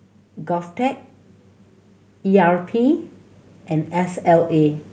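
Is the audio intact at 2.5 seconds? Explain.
No. At 2.5 seconds the clip is in the middle of an automatic gain rise that runs from 2.23 to 3.10 s. The gain control judged the incoming level too low and pushed its gain up step by step, adding about 4 dB over those 0.87 seconds. Because the whole signal is amplified, the speech and the background noise beneath it swell together, so the level audibly creeps upward rather than jumping.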